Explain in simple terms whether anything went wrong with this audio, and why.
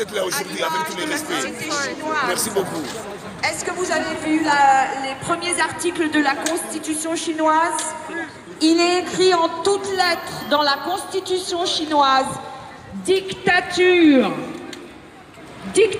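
Nothing went wrong here: the signal holds steady throughout, with no breaks, jumps or damage anywhere that a listener would notice.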